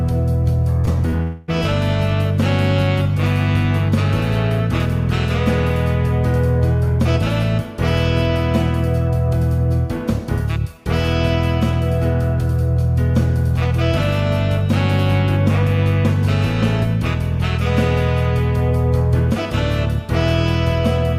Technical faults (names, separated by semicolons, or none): short concealed packet loss; long network dropout